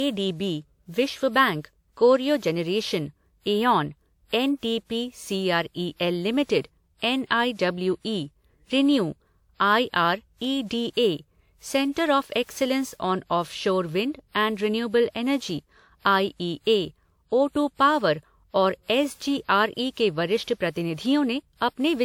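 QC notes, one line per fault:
Throughout, generation loss: swirly, hollow speech with smeared consonant attacks, likely from around five passes through WMA at roughly 96 kbit/s, with each re-encode adding fresh quantisation noise.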